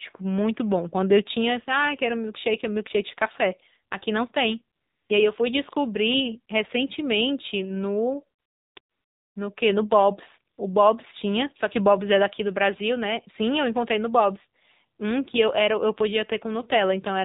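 AMR narrowband mobile codec, throughout: the speech has passed through the AMR-NB mobile codec, which samples at 8 kHz and rebuilds the voice from a vocal-tract model fed by a few pulses in each 5 ms slice of every 20 ms frame. Nothing above 4 kHz survives, so the sound is boxed-in and phone-like. The plainly audible buzzy, synthetic edge on the voice fits one of the lower modes, around 7.4 kbps.

AMR comfort noise, at 4.76 to 5.10 s, 8.40 to 8.76 s, 8.80 to 9.36 s and 10.54 to 10.58 s: here the sender judged the talker silent and stopped transmitting speech frames, and the receiver painted in synthetic noise from a rough level and spectrum description. The real background is swapped for a smooth, steady hiss that switches on and off abruptly. The gaps run 340, 360, 560 and just 40 ms.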